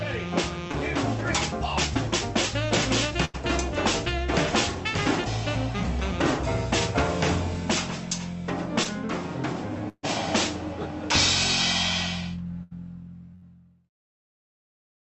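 A brief smear, like a tiny wobble, passes at 0.71–0.75 s and again at 8.84–8.87 s. Each is short concealed packet loss: about 20 ms of audio never reached the decoder in time. The receiver covered the hole by extending the sound just before it for a moment, then blended back into the real signal. That is why each gap is only a slight blur and not a dropout.

Longer held or fading stretches, followed by a jump forward, occur at 3.25–3.36 s, 9.89–10.05 s, 12.63–12.73 s and 13.35–13.44 s. These are bursts of packet loss, where several packets in a row were lost or arrived too late to play. The first, third and fourth each lose about 60–80 ms. The one near 10 s loses about 140 ms, and its 40 ms of silence is where the concealment fades out completely before audio resumes. In each burst the receiver continued the last sound and let it decay, then picked up further along with the missing portion gone. 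All of this comes through a call codec path whose top end stops near 8 kHz.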